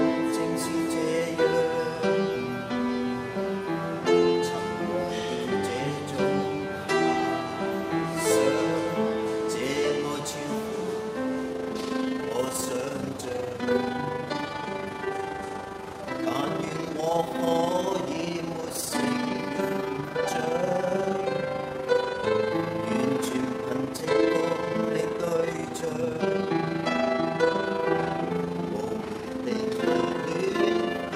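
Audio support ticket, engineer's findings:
Overlap-add ripple, 11.52 s to end of clip. Probable component: frame-based processing stage resynthesising with a window/overlap pair whose gains do not sum flat. Level swings about 6 dB once per frame, around 30 times a second. Audible as rapid flutter, rough tremolo over all sound from onset onward.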